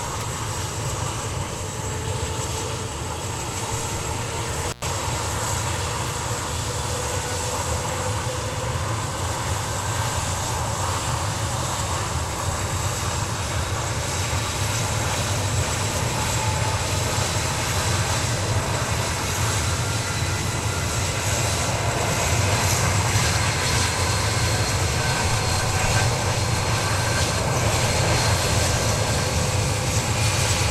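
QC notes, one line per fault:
4.68–4.87 s, intermittent contact. The sound drops out abruptly with crackle at both edges. The gap lasts about 99 ms. A loose plug or cable briefly lost its connection, breaking the signal path, and scraping contacts produced the crackle as it opened and closed.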